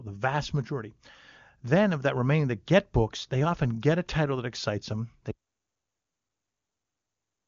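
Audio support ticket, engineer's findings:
Audio dropout to silence from 5.31 s, right after "title that excites them", running to end of clip. Hard cut to silence, no room tone; flat line on waveform, blank spectrogram. Likely input loss, link failure or mute while the recorder kept writing silence. Band-limited near 7.2 kHz, consistent with AMR-WB at a high rate.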